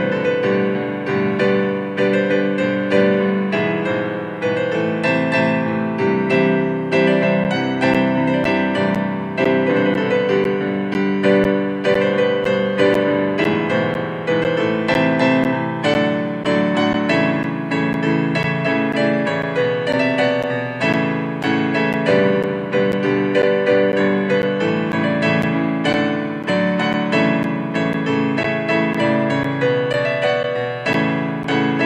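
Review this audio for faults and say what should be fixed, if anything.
Regular ticks every 0.5 s from 7.44 to 31.44 s, about fifty in all, are periodic USB or driver dropouts, each losing about 10 ms of sound to silence. Prevent them by stopping the scheduled background task that stalls the USB bus or audio driver, or by using a larger audio buffer.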